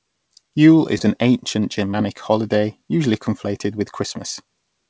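Speech, sent over a call path that keeps nothing above 8 kHz, with two short concealed packet losses at 0.98–1.01 s and 1.91–1.94 s. Each covers about 20 ms of missing audio by extending the preceding sound, so it comes across as a brief smear or wobble rather than the abrupt silence of a plain dropout.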